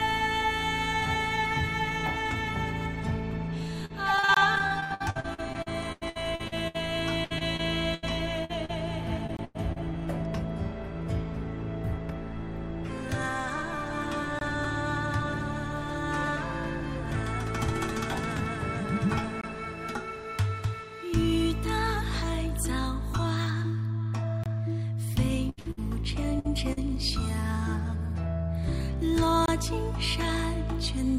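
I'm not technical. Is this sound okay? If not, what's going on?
No. Two things went wrong. First, repeated packet loss (robotic sound): from 3.85 to 9.78 s and again from 25.49 to 26.79 s, pieces of audio kept going missing in transit, up to about 0.1 s at a time. The system covered each hole by stretching the last bit of sound, so those stretches come out choppy, with pieces missing.

Second, a gap between chunks: the audio was handled in 5-second pieces, and a small silence of about 23 ms was left at each join. These dropouts land at 4.34, 9.37, 14.39, 19.41, 24.44 and 29.46 s, heard as regular brief blinks in the sound.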